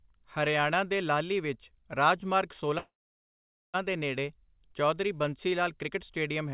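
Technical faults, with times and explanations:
2.78–3.76 s, call audio freeze: after "ਲਾਹਲੀ ਵਿੱਚ ਰਾਜ ਮਾਰਗ" a brief fading buzz or hiss gives way to 0.82 s of silence, then "ਦੇ ਨੇੜੇ ਚੌਧਰੀ ਬੰਸੀ" resumes intact, nothing skipped; likely delayed packets emptied the jitter buffer.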